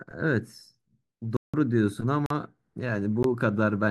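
Speech cuts out abruptly three times: a short hole from 1.37 to 1.54 s, a briefer gap from 2.26 to 2.30 s, and a tick at 3.23 s. Each is a block of digital silence: samples replaced by zeros, with hard edges and no fade. The two longer gaps fit 8192- and 2048-sample blocks.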